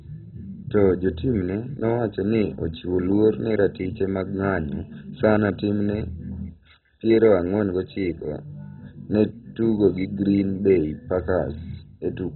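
Throughout the speech, likely heavy MP2 compression, starved of bits at a rate consistent with about 16 kbps, has switched off the upper sub-bands and coarsely quantised the rest. Nothing survives above 4 kHz, leaving the sound dull, gurgling and granular.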